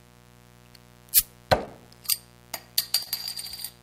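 Right from the start there's a mains buzz under everything, built on 60 Hz and sitting roughly 25 dB below the sound. It comes from switching spikes twice per mains cycle leaking in, so its harmonics stack up into a steady, raspy edge that never lets up.

At 1.65 to 1.69 s there's a short concealed packet loss: a few hundredths of a second never arrived, so the receiver stretched the preceding sound to bridge the gap before blending back in. It comes across as a quick smear. The same thing happens again at 3.03 to 3.08 s, a longer patch-over that gives a brief wobble.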